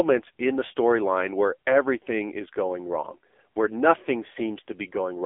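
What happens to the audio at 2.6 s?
At 2.6 s the speech sounds buzzy, thin and synthetic, boxed into about 250 Hz to 3.5 kHz. The AMR narrowband mobile codec, present throughout the clip, rebuilds the voice from a coarse vocal-tract model, and the heavy damage fits a low rate near 6.7 kbps.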